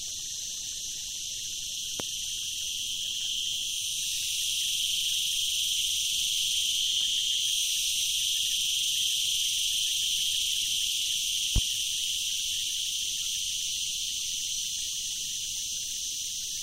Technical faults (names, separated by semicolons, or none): loud pop